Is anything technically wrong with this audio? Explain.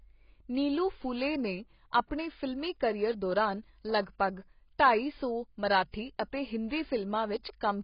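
Yes, there's one problem, and it runs through the whole speech clip. The audio has nothing above 5.2 kHz and sounds dull and smeared, with a warbly, fizzy edge on sibilants. That's likely heavy AAC compression, which fits a low bitrate around 16 kbps: the encoder drops the top band and coarsely quantises what remains, leaving spectral holes.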